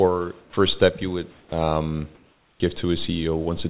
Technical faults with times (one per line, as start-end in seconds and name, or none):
0.41-0.53 sound dropped by the voice detector
1.31-1.52 comfort noise in place of the background
2.15-2.60 comfort noise in place of the background
2.58-2.60 onset clipped by the voice detector